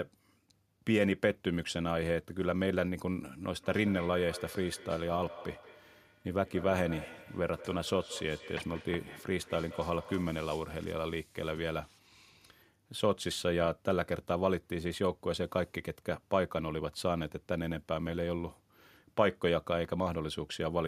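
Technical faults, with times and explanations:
3.37–10.53 s, feedback echo between two devices: another device in the room replays this signal into the microphone, beyond its echo canceller's reach, so sound recurs about a fifth of a second later, up to about 17 dB down; spectrograms show faint, thinner copies of each onset at that spacing.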